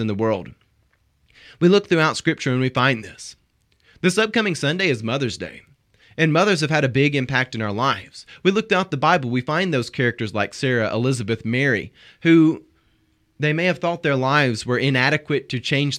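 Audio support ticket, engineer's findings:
No technical faults detected in the speech signal; no symptoms found that would point to a failing component in the capture or playback chain.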